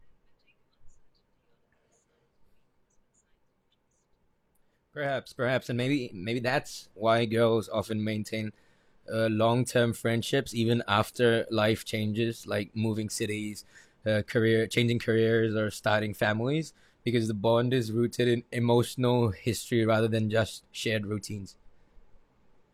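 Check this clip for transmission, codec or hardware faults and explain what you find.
No faults detected in this recording.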